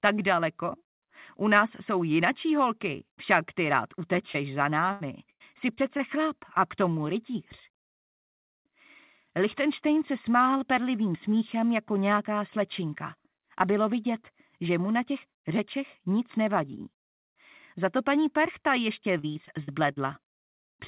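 Short concealed packet loss at 4.32 to 4.36 s: about 20 ms of audio arrived too late or not at all, so the receiver extended the preceding sound to fill the hole and then blended back into the real signal, leaving a brief smear or wobble.

Repeated packet loss (robotic sound) follows at 4.92 to 6.01 s, with four gaps (the longest 96 ms), and again at 19.19 to 19.98 s, with six gaps (the longest 43 ms). In each stretch, lost packets were patched by extending the last sound before the next gap arrived. About 21% and 24% of the two spans respectively is filler, so the audio turns choppy and robotic with pieces missing. Throughout, nothing is heard above 4 kHz, which fits a narrowband telephone codec such as G.711 at 64 kbps.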